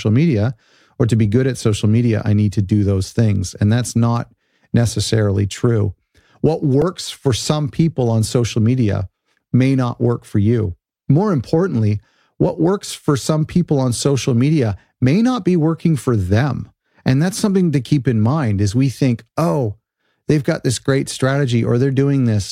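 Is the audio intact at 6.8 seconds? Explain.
No. At 6.82 s, just before "for some people on", a repeated buffer occurs: a tiny chunk, which fits a 64-sample buffer, replays with hard joins, heard as a brief click.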